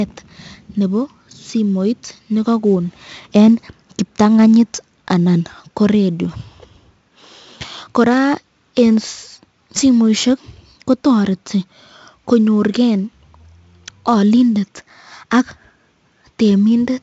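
Throughout, a gritty hiss rides on every loud passage of the speech and nothing reaches above 7.7 kHz, pointing to heavy 4-bit ADPCM compression at roughly 64 kbps.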